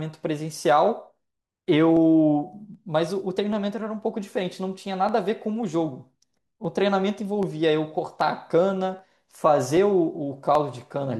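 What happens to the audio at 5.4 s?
At 5.4 s the speech sits inside a run of regular clicks, repeating every 0.78 s from 0.40 to 10.55 s. This is likely clock drift buffer slips: two mismatched clocks, roughly 400 ppm apart, force a drop or repeat of about 15 samples each time. On a spectrogram each slip is a thin vertical broadband line, and on the waveform it is a small step in the signal.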